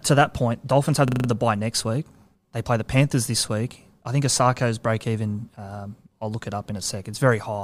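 At 1.08 s a system hang loop begins, lasting until 1.28 s, just before "the bye next week". The system stalled while the sound hardware kept replaying one 40 ms buffer. It repeats five times, giving a rough stutter at 25 Hz. Little or no sound seems lost.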